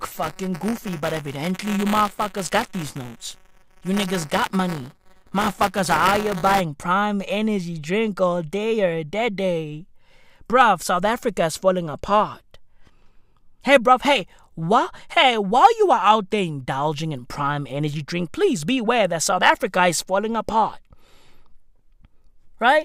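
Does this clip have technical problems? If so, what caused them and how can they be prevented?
Yes. Buffer tearing runs from 0.0 to 6.61 s: a robotic 188 Hz buzz, which fits a 256-sample buffer, where writer and reader cross each period and a small slice of audio from a lap about 20 ms earlier is spliced in. Unlike mains hum, it vanishes when the speech pauses. Keeping the write pointer a safe margin ahead of playback, with adequate latency, prevents it.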